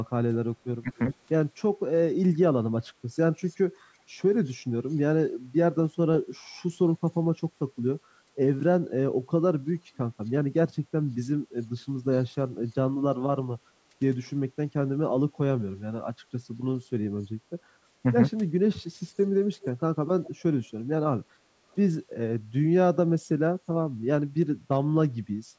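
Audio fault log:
0.81–0.93 s, speech suppressed in double talk: the talker briefly dips by about 25 dB for roughly a tenth of a second, likely the echo canceller ducking both sides at once.
3.47, 4.45, 19.61, 20.24 and 21.71 s, echo leak: faint scraps of the voice return 372 ms late, likely loudspeaker pickup the canceller missed. They're quiet, about 25 to 40 dB down, except at 19.61 s, where the echo is closer, about 15 dB under.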